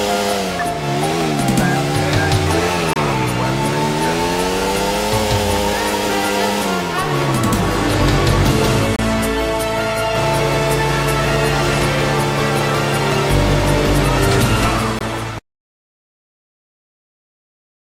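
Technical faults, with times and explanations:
2.93–2.96 s, 8.96–8.99 s and 14.99–15.01 s: gap between stream segments. The timestamps of consecutive segments fail to meet, leaving a short stretch with no samples. The player fills it with silence. The result is a hard-edged hole of about 27 ms, 28 ms and 21 ms respectively. The holes repeat every 6 s, which points to 6-second segments. Nothing is lost from the audio itself; the sound is only pushed apart at each join.
15.39 s to the end: audio dropout to silence. The input feeding the recorder or encoder was likely lost, whether through a disconnected device, a failed link or an unintended mute. Writing continued anyway. The sound cuts off abruptly in mid-flow and is replaced by dead silence with no room tone. It never returns before the clip ends, so everything that followed that moment is gone rather than merely quiet.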